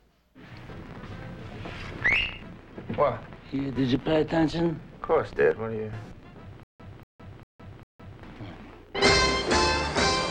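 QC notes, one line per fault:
6.63–8.23 s, stutter with silent gaps: the same 235 ms burst comes back four times, each followed by about 164 ms of dead digital silence, so it ticks along every 400 ms. Likely the stream stalled and kept replaying its last fragment, losing what should've played there.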